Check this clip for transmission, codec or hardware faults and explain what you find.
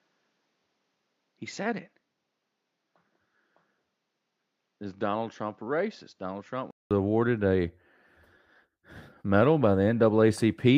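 One fault is present: an input switched to a poorer device, covering the opening stretch of the speech. From 0.0 s to 6.91 s nothing is heard above 7.3 kHz, so the sound is dull and boxy. It sits about 10 dB lower and carries its own faint background noise, roughly 50 dB under the signal. At 6.91 s a 200 ms silence falls, and the full, brighter sound returns with "awarded a." The likely cause is the system taking input from a narrower-band microphone or headset profile and then switching back. A codec bandwidth drop would narrow the band alone. Here the level, tone and noise floor all change together at a silent break.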